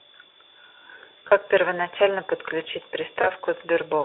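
Packets went missing at 1.27 s and again at 3.21 s, producing VoIP packet loss concealed by the speech codec, which runs over a narrow telephone-style band. The decoder had to extrapolate from its last pitch and filter while lowering its gain. At 1.27 to 1.32 s a 40 ms gap, fitting two lost frames, becomes a brief buzzy smear. At 3.21 to 3.30 s a 20 ms loss leaves the speech weak and distorted for roughly 90 ms.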